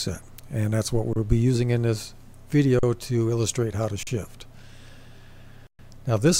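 Four underruns with held sample, at 1.13, 2.79, 4.03 and 5.67 s (about 30, 40, 40 and 120 ms), each showing as a flat waveform line and a blank spectrogram gap before playback resumes.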